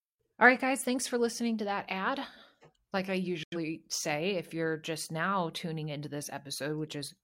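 A digital broadcast dropout cuts the speech from 3.43 to 3.57 s. The receiver stopped getting valid frames and muted, fading out in about 3 ms. The speech vanishes into silence, then resumes later, with a gap that fits roughly two lost frames.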